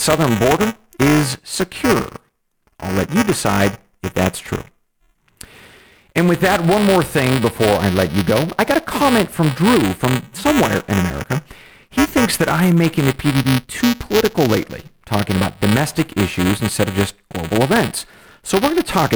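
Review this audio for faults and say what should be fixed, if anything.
Buffer tearing runs through the whole clip. The software writing the ring buffer and the hardware reading it have drifted out of step, so their positions cross inside every period. A small slice of each buffer, around 7 percent, still holds audio from the previous lap, roughly 5 ms old, with abrupt joins on both sides. Those repeating discontinuities put a robotic buzz at 345 Hz over the speech, which fits a 128-sample buffer. The buzz sounds only while speech is present and vanishes in the gaps. To prevent it, keep the writer a safe margin ahead of the hardware read pointer, resynchronising on every underrun or overrun, or use a larger buffer or more periods.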